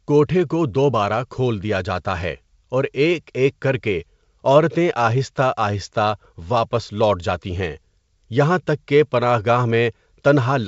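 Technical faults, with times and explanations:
The speech runs through G.722 wideband telephone coding at 64 kbit/s, which keeps it clear up to about 7 kHz with at most a faint trace of the coder's upper-band hiss.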